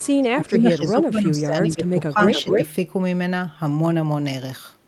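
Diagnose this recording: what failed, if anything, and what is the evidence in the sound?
The failure sits in call processing: the far end was likely playing the call on a loudspeaker, with its echo canceller letting part of its microphone pickup through. The echo leak shows as a delayed copy of the speech at 0.00–0.22 s and 1.86–1.90 s, trailing by 227 ms and sitting well down (roughly 25 and 35 dB under the speech). At 2.32–2.65 s the copy arrives 277 ms late at close to full speech level.

The same canceller also mishandled double talk. It likely could not tell its own talker from the returning echo, so it turned everything down. This speech suppressed in double talk runs from 0.20 to 2.21 s, where the speech repeatedly dips by up to around 10 dB for about a second and a half in total. A shorter dip of roughly 5 dB, lasting about 100 ms, falls between 2.44 and 2.60 s, inside the loud echo.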